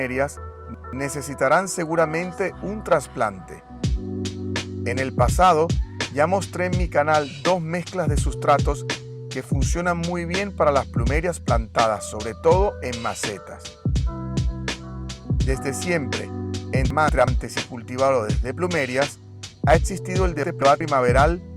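Chunks out of order show up three times: 0.37 to 0.93 s, 16.90 to 17.28 s, and 20.43 to 20.81 s. A roughly 0.19 s block of audio plays late, two blocks behind in the first case and one behind after that, so you get a brief jumbled stretch with hard joins.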